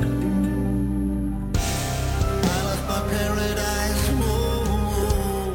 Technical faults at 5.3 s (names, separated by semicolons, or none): imaging from sample-and-hold upsampling